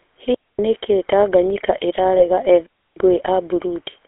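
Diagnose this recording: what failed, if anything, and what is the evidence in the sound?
The speech has a buzzy, gravelly roughness throughout, with a narrow band that loses everything above about 3.5 kHz and below about 300 Hz. The damage is plainly audible. This points to the codec stage, specifically the GSM full-rate codec, which fits a 13 kbps coder. It models the vocal tract as a filter and drives it with a coarse pulse train, keeping only every third excitation sample, so fine detail becomes grit.

There are two clean holes of near silence: 0.34 to 0.59 s, lasting about 247 ms, and 2.66 to 2.97 s, lasting about 304 ms. Neither has a noise burst around it, and each drops in and out with only a very brief fade. That is a digital wireless dropout in the radio link. The receiver lost too much data, and rather than output garbage it muted briefly until the stream recovered.

From 2.18 to 2.23 s the speech briefly freezes into a rough, metallic ringing instead of continuing naturally. 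This is the signature of lost GSM frames in the network path. The corruption fits a single 20 ms frame. The decoder concealed it by reusing the last good frame's parameters, which produces that held, tinny tone. The loss is short enough that it never fades to silence.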